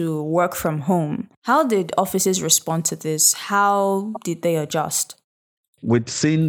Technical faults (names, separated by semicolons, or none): repeated frames